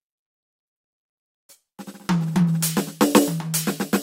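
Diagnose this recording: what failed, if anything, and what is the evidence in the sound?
Nothing failed: the music shows no audible defect at any stage of the chain, so there is no evidence to point to and no mechanism to explain.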